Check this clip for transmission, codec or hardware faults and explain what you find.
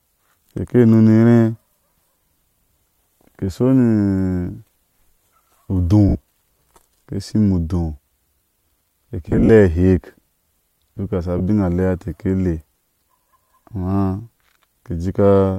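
There's one fault here: lost LE Audio frames, at 6.09 s (about 60 ms), from 9.29 to 9.49 s (gaps scattered over 200 ms, longest around 40 ms), at 11.38 s (20 ms) and at 13.23 s (30 ms). The decoder covers each gap by repeating the last spectrum with scrambled phase, so the speech briefly turns into a hissy smear. The 9.3 s stretch sounds choppiest. The gap sizes fit 10 ms LC3 frames.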